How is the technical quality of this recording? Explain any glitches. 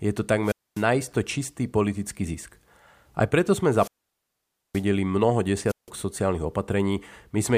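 The speech recording has repeated wireless microphone squelch dropouts. The FM radio link faded until the receiver muted, so hiss swells and then the audio cuts to near silence. This happens from 0.43 to 0.85 s (after "je to", before "čistý politický zisk", muted about 0.25 s), from 3.75 to 4.85 s (after "aj preto sme", muted about 0.87 s), and from 5.67 to 5.90 s (muted about 0.16 s).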